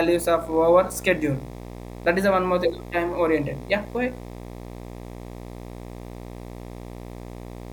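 Right from the start and all the way through, there's video or display buzz sitting under the speech. A screen or its video cable is leaking into the audio path, so you get a steady buzz at the 60 Hz field rate, the picture's refresh, with a gritty hash riding on top of it. It's not subtle either, roughly 15 dB below the speech.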